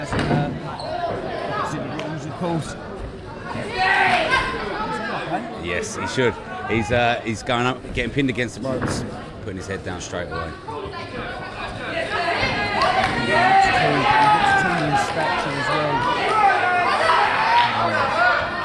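No technical faults are audible anywhere in the recording.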